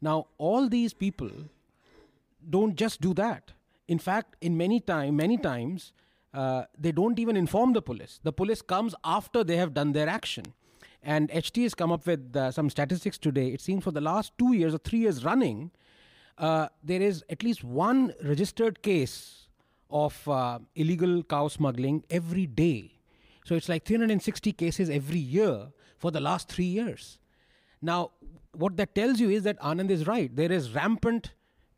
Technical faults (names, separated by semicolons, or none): bit error spike